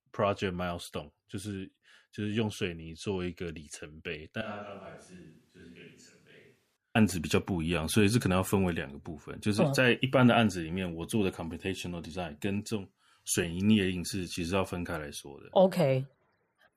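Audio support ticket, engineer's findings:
Switch to a distant microphone, 4.42–6.76 s. Speech abruptly roomy, hollow, thin in bass, about 10 dB quieter, room noise near 30 dB below speech. Likely close-mic dropout, far pickup substituted.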